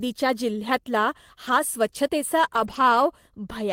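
At 1.47 to 1.53 s and again at 2.55 to 2.81 s the speech turns briefly rougher and noisier with no gap: lost packets rebuilt from error correction. The decoder plays low-bitrate copies, and the spectrogram shows smeared, grainier bands with no dropout in the waveform.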